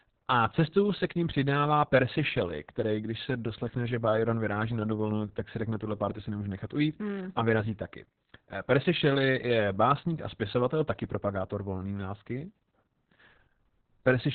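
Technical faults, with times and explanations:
Throughout, Opus voice compression: the speech has nothing above 4.4 kHz, so it sounds muffled, and the coarsely coded excitation makes it hoarse and slightly robotic. This heavy damage points to the narrowband SILK linear-prediction mode at a very low bitrate, around 6 kbps.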